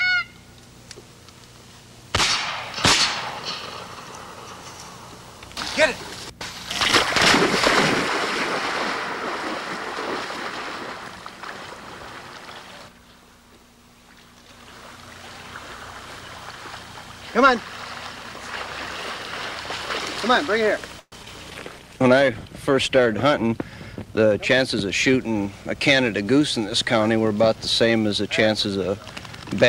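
At 20.99 s the audio stalls for about 0.13 s, until 21.13 s. The last sound is stretched into a fading buzz that dies to near silence for roughly 40 ms before the audio resumes exactly where it left off. This pattern points to a call audio freeze, likely packets held up in transit so the jitter buffer ran dry. On a spectrogram the final harmonics smear horizontally and thin out into a dark gap. The waveform shows a decaying tail, then a flat stretch.

Right after, at 21.23 s and 21.25 s, come two short concealed packet losses, each lasting only a couple of hundredths of a second. Both are brief blips in which the receiver patched missing audio by extending what came just before. They are heard as a small smear or wobble, and a few tens of milliseconds of real sound are lost. The spectrogram shows two narrow, slightly blurred vertical slivers where fine detail is lost. The waveform shows short patched stretches that blend back into the real signal.

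From 21.50 s to 25.75 s a call bitrate drop makes the sound rough and watery, with the top end muffled. That fits the encoder falling from around 128 kbps to 24 kbps and staying at the lowest rate for about 2.6 s. On a spectrogram the upper frequencies are cleanly sheared off by a flat ceiling, and the remaining energy looks blotchy and coarse until full bandwidth returns.

Inside that stretch, from 23.06 s to 24.74 s, a jitter buffer speed-up plays the audio about 7% fast at unchanged pitch. About a tenth of a second in total is removed, in small pitch-period slices, to shrink a backlog of buffered audio. It sounds slightly hurried. A spectrogram shows events packed marginally closer with harmonics at the same height. The waveform shows tiny splice points where cycles were dropped.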